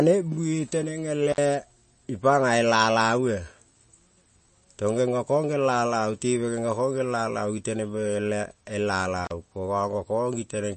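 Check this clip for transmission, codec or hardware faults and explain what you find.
Two faults stand out: a constant coding degradation and two brief dropouts.

Throughout, the speech sounds watery and swirly, with smeared consonant onsets and nothing above 8.4 kHz. This is likely MP3 compression at a starved bitrate, fitting roughly 34 kbps, where the encoder cuts the treble and lets weak frequency lines flicker between frames.

At 1.31 to 1.38 s and 9.25 to 9.31 s the sound cuts out briefly with crackle at each edge, for about 56 ms and 33 ms. This is intermittent contact: a loose cable or plug momentarily opening the signal path.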